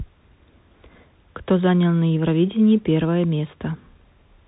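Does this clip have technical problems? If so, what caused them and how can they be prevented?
Yes. The speech has passed through a Bluetooth CVSD headset codec throughout. Nothing gets through above about 3.8 kHz, and the damage is plainly audible: a granular hiss sits under the speech, and s sounds turn scratchy. This happens because CVSD codes each sample as a single up-or-down step whose size adapts, which fits a 64 kbps link. A plain telephone band-limit cuts the highs just as sharply but stays clean, without that gritty texture. To prevent it, use a headset profile with a wideband codec, or record on a wired microphone.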